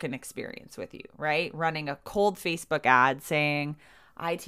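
No technical faults are audible.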